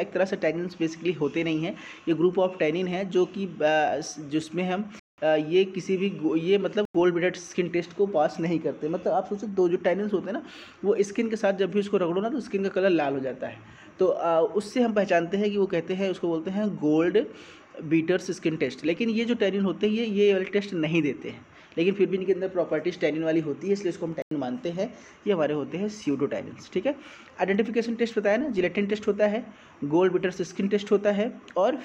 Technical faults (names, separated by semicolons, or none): corrupt frame muted; corrupt FLAC frame